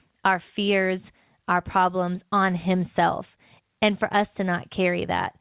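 Nothing in this speech stood out on listening; the content stops at about 4 kHz, as expected for a call carried over G.711 A-law.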